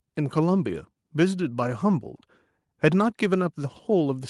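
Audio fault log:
No audible faults were found in this speech clip.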